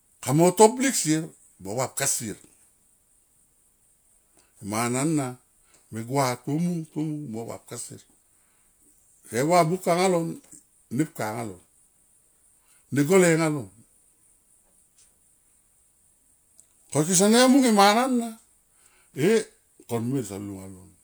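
No technical faults can be heard anywhere in this speech recording.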